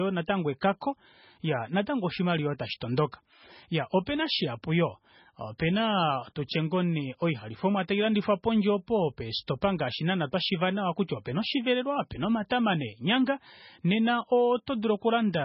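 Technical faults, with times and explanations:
Throughout: MP3 compression. The speech sounds watery and swirly, with a hard ceiling at 5.5 kHz; on a spectrogram everything above that line is empty, and below it the weaker detail breaks into flickering patches that switch on and off between frames. The damage is heavy, and the likely cause is an MP3 encoder starved of bits, pointing to a very low bitrate around 16 kbps, so it dropped the treble and the quieter frequency lines.
9.47 s: pre-echo. A short hiss leads a sharp onset by about 14 ms, softening its attack. The waveform shows a thin smear of noise just before the jump in level, and the spectrogram shows a brief broadband haze ahead of the transient. The codec spread its quantisation noise, sized for the loud onset, across its whole block, so that noise also fills the quiet moment before the attack.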